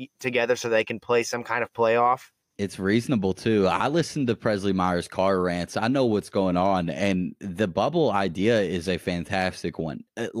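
Nothing stood out as a technical fault on listening to the speech in this recording.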